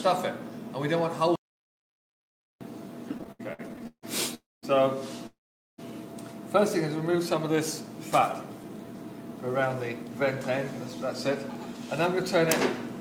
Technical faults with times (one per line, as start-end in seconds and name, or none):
1.36-2.61 audio dropout to silence
3.15-4.04 repeated stalls (stutter)
4.34-4.65 call audio freeze
5.27-5.80 call audio freeze
6.96-7.57 jitter buffer slow-down
9.47-10.51 jitter buffer speed-up